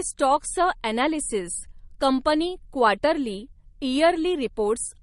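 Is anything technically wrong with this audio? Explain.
Yes. Transcoding between lossy codecs runs through the whole clip. Nothing is present above 12 kHz, and the speech carries two kinds of coding damage at once, heard together. The likely cause is a low-rate MP3 pass, around 42 kbit/s, later re-encoded with Opus at about 48 kbit/s. The second codec spends bits reproducing the first one's artefacts while adding its own, and the lower bandwidth limit survives the chain.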